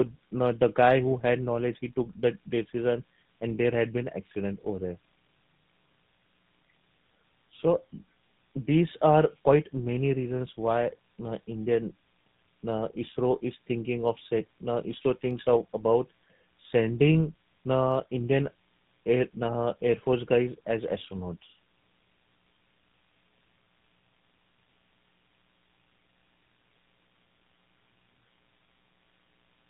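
From start to finish the speech carries tandem speech coding: it passed through two low-rate speech coders in a row, with the last likely GSM full rate, each re-encoding the other's already degraded output. The result sounds rougher, more muffled and more warbly than a single codec would. On a spectrogram nothing appears above 3.8 kHz, and the harmonics look smeared and unstable. The waveform shows coarse, grainy envelopes rather than clean periodic shapes.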